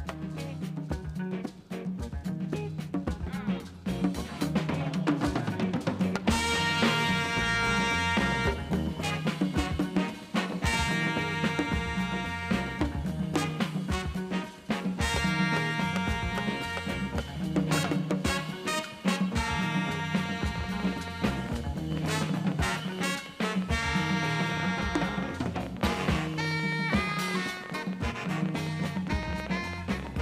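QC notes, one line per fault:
19.95–30.17 s, train of clicks: about a hundred near-identical pulses at roughly 10 per second, unevenly spaced, peaking around 10 dB above the audio. They persist through pauses and keep one shape, unlike random crackle, which points to likely equipment interference or a faulty connection.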